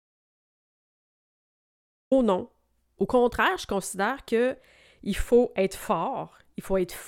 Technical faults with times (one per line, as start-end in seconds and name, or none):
0.00-2.11 audio dropout to silence